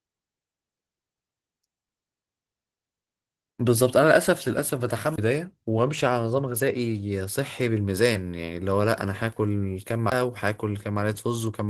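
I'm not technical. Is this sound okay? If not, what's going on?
No. Two things went wrong. First, the whole recording went through Opus voice compression, which squeezes speech into very little data by keeping a rough model of the voice's shape and only a coarse version of its fine texture. Here it was squeezed hard enough that the damage is plainly audible throughout: the speech comes out hoarse and grainy, with a faintly robotic edge. The upper sounds aren't cut off, but they lack natural detail.

Second, there are two CD skips. In a CD skip, the player's laser loses its place on the disc and lands on a different part of the spiral track, so the player goes silent for a split second and resumes from somewhere else. The first one, from 5.16 to 5.18 seconds, is a tiny gap of about a fiftieth of a second. The second, at 10.10 seconds, is similar. Each is heard as a brief break and an abrupt jump in the speech.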